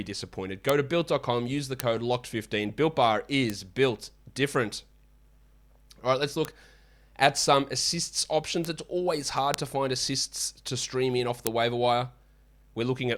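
Bit error spikes tick sharply at 0.69, 1.80, 3.50, 6.45, 8.65, 9.54 and 11.47 s, peaking near about -3 or -9 dBFS. Single flipped bits jolt one sample or a few, then snap back.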